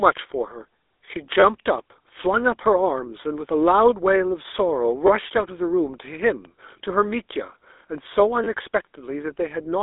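GSM full-rate codec throughout: the pulse-excited vocal-tract model leaves a buzzy, gravelly roughness on the speech, with nothing above 3.8 kHz.

Repeated buffer at 1.40–1.43 s, 3.21 s, 5.07–5.09 s, 6.45 s and 8.44–8.47 s. Audio arrived late, so the last short chunk replayed, giving brief buzzy stutters that suggest a 10 ms buffer.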